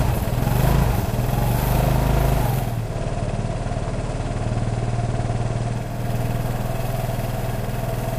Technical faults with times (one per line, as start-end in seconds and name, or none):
2.59-6.12 digital radio blending to analogue